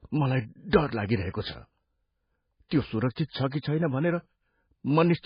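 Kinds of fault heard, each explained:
MP3 compression: Across the whole speech clip nothing is present above 5 kHz, and heavy watery swirling comes from weak frequency lines dropping in and out between frames, leaving s sounds metallic and attacks smeared. The likely cause is MP3 coding at roughly 16 kbps.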